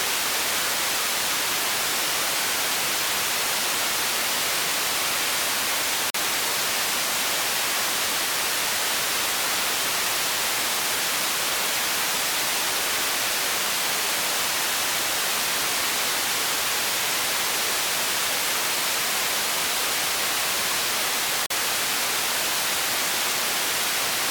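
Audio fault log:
6.10 to 6.14 s and 21.46 to 21.50 s, block of digital silence: each is a short, hard hole of about 43 ms. A block of samples was zeroed, probably because the output buffer wasn't filled in time. The identical lengths point to a 2048-sample buffer at 48 kHz. With no fade at either edge, the waveform jumps abruptly.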